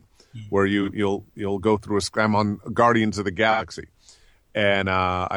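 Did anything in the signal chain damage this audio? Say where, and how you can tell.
Yes, AAC frame loss with concealment, at the codec stage. Smeared patches at 0.82–0.89 s and 3.51–3.63 s. The decoder rebuilt the missing frames from the last good spectrum.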